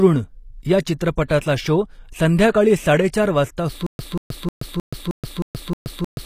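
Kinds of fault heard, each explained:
HE-AAC compression: The codec likely kept only the lower spectrum and rebuilt the treble by copying bands upward, which fits a low bitrate around 24 kbps. The speech has plainly audible codec damage throughout, with gritty, synthetic upper sibilance and nothing above 15.5 kHz.
pre-echo: The transform codec spread quantisation noise across a whole block, so noise meant for a sharp attack leaked into the quiet before it. A short hiss precedes onsets at 1.24 s (about 59 ms), 2.52 s (24 ms, just before "साडे चार") and 3.09 s (45 ms).
stutter with silent gaps: Playback stalled, and each retry likely replayed the last fragment before running empty. From 3.87 s to the end, a 185 ms burst repeats seven times with 126 ms of digital silence between, every 311 ms, and the audio that should have played is lost.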